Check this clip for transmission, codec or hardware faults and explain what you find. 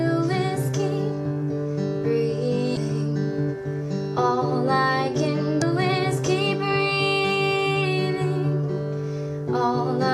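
Two brief faults are audible, both from damaged data in a compressed stream. They fall at 2.74 to 2.77 s and at 5.62 s. Corrupted bytes in the stream make the decoder misread frames and lose sync. Each spot is heard as a short chirp or blip.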